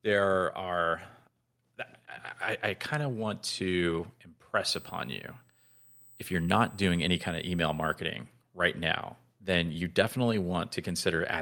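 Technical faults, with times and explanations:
1.02 s, microphone volume stepped up: the input gain jumps by about 5 dB at once, lifting speech and background noise together as the call software tries to compensate for a quiet microphone. The waveform envelope shows an abrupt step, and the spectrogram brightens evenly across all frequencies.
4.69 to 7.94 s, USB whine: a steady high tone at 8 kHz, strongest at its 16 kHz harmonic and roughly 25 dB below the speech, comes from USB microframe current leaking into the microphone's power or ground. The spectrogram shows thin horizontal lines at both frequencies.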